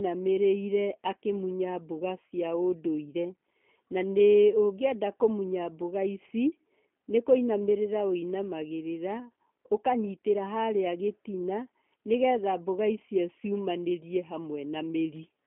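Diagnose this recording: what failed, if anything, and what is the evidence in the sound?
It's the codec stage: the speech has clearly been through G.729 from start to finish. Nothing gets past about 3.7 kHz, the band sits at roughly 200 Hz to 3.4 kHz, and there's a rough, synthetic edge throughout, which fits an 8 kbit/s coder rebuilding speech from a filter model and a few pulses per frame.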